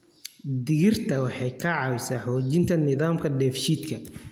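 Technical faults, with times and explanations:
No technical faults detected.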